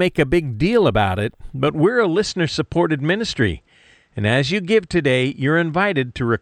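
A speech clip. From 1.68 s, right after "big deal about it", the sound turns duller to the end at 6.42 s. Nothing is left above 8.8 kHz. There is no gap and no level jump, and a faint new noise floor appears. The likely cause is an input switched to a poorer device.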